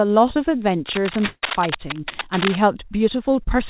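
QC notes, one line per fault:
0.87–2.57 s, cable scratch noise: dense, uneven bursts of scratching and rustling sit over the speech at about 5 dB below it, for well over a second. This is likely a worn cable, connector or control being moved, its contact resistance jumping rapidly and injecting noise.
1.26–1.45 s, call audio freeze: the sound stalls into a fading buzz, dropping to near silence for its final 40 ms, then resumes where it stopped, inserting a 165 ms gap with nothing lost. Packets were likely held up in transit, emptying the jitter buffer.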